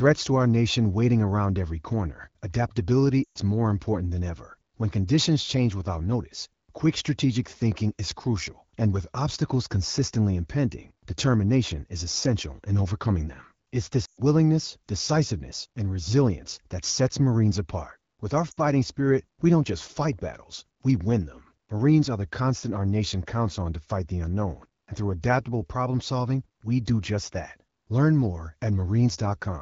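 Lost AMR speech frames: failed frames force the decoder to repeat the last pitch and vocal tract settings with falling gain. At 3.24–3.39 s after "around every corner adaptability" and 14.05–14.21 s, about 120 ms drops to near silence. At 18.51–18.60 s, 60 ms dips before "spirit we don't just".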